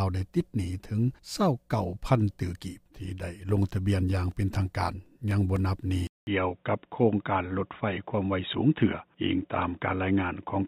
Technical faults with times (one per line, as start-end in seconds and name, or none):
4.31-5.81 periodic USB or driver dropouts
6.07-10.68 input switched to a poorer device